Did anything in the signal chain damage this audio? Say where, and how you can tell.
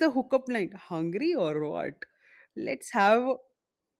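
No, nothing in the signal chain damaged this audio.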